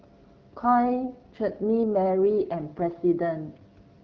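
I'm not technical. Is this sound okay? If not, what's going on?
No. From 0.99 to 2.96 s an AMR rate drop makes the voice rougher and more synthetic. Unlike a dropout, there's no gap or muffling, just coarser detail until it recovers.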